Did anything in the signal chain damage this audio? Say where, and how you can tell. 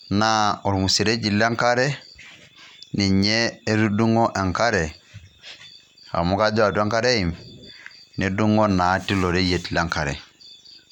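No, nothing in the signal chain damaged this audio.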